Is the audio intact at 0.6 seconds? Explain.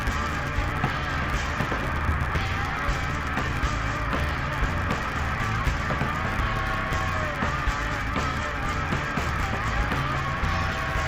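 No, the interleaved audio is being read as planar there, as it is throughout. Each 10 ms block's alternating left and right samples get split into halves and played at half speed. The result is dull, robotic and buzzing at 100 Hz. A spectrogram would show smeared harmonics with a 100 Hz comb, and a waveform would show a repeating block pattern.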